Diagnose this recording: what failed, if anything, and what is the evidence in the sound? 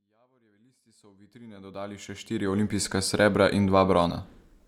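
Nothing in this speech recording points to a failure at any stage of the chain. The level rises in a smooth fade-in from the very beginning until about 2.81 s, with no click or hard edge.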